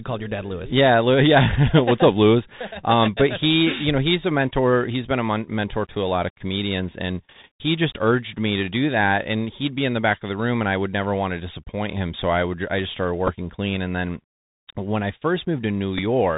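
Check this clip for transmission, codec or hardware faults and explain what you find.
Two faults stand out in this speech: narrowband Bluetooth headset coding throughout, and two brief packet repeats near the end.

Bluetooth CVSD headset codec, throughout: the one-bit delta coding, consistent with a 64 kbps CVSD link, cuts everything above 4 kHz, roughens s sounds and leaves plainly audible granular hiss.

Bluetooth headset packet repeated, at 13.27–13.33 s and 15.98–16.00 s: lost data was filled by re-decoding earlier packet bits. Each gap spans 7.5 ms, which fits two lost packets, and is heard as a short buzzy tick.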